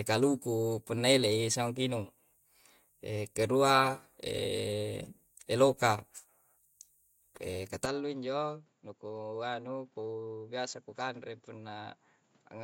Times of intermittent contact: none

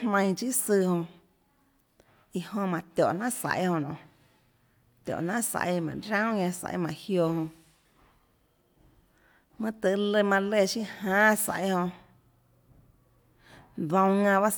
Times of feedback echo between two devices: none

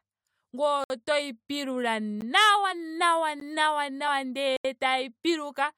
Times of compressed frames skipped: 2.71, 4.07

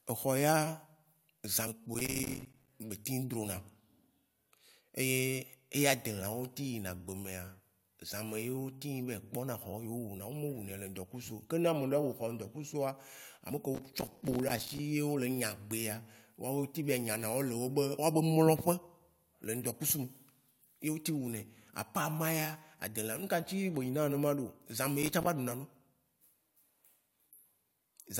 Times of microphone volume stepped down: none

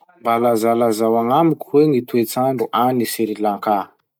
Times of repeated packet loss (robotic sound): none

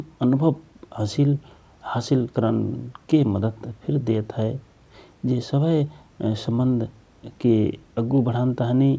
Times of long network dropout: none

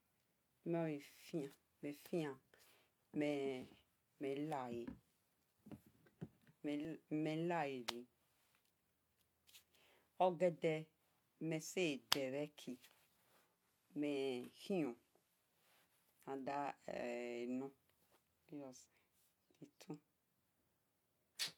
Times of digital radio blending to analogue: 13.39-15.54

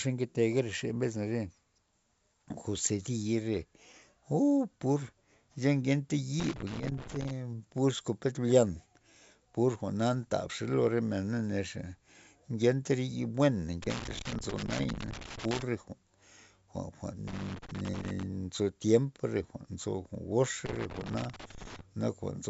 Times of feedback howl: none

